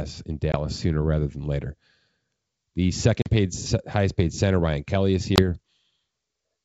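At 0.52 s, 3.22 s and 5.36 s the speech drops out in hard-edged gaps of 20 ms, 40 ms and 20 ms, which fits about one, two and one lost packets on an ADPCM call. Each gap is filled with silence, and the decoder's adaptive predictor and step size drift away from the sender's. When the speech resumes it comes back with some distortion, settling within tens of milliseconds, against a clean wideband G.722 background.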